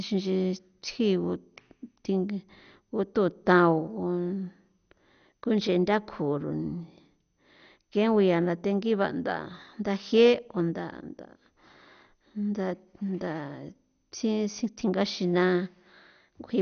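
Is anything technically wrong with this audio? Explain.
Yes. The speech carries MP2 compression damage from start to finish. Nothing is heard above 6.5 kHz, so the voice sounds dull and muffled. The likely cause is MPEG Layer II coding at a low rate, which fits roughly 48 kbps. The coder splits the sound into 32 sub-bands and shares out bits. With too few bits, it shuts off the upper bands entirely. The remaining bands are coarsely quantised and flicker, giving a plainly audible gurgling, granular texture.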